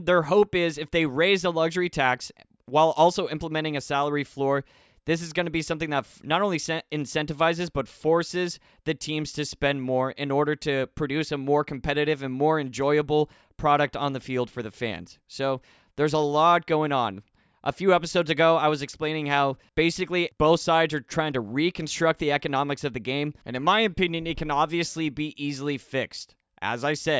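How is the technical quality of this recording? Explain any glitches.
Listening through the recording, nothing stood out as a technical glitch or problem.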